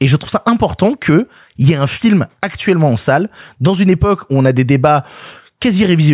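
Nothing technical stands out in this bit of speech; there's simply no fault to point to anywhere along it.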